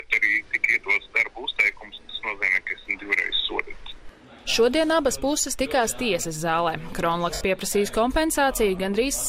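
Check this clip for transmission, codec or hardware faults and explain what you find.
One transmission fault shows up, a short dropout, while the light lossy compression on the clip sounds as that codec normally does.

Lost LE Audio frames, from 7.34 to 7.41 s: a 70 ms hiss-like smear replaces the sound and thins out before it returns. The LC3 decoder refilled the gap by repeating the last spectrum with randomised signs and fading it, which fits about seven 10 ms frames going missing.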